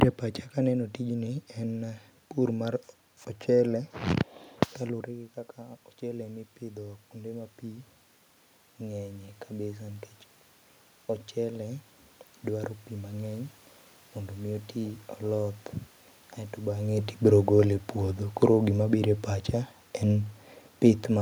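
The automatic gain control begins raising its gain at about 4.85 s in this speech recording, after the talker moves away from the microphone around 5 s and the level at its input drops by about 11 dB. The gain climbs slowly, adding about 7 dB by 10.11 s, so the voice creeps back up over roughly five seconds and the room noise behind it swells by the same amount.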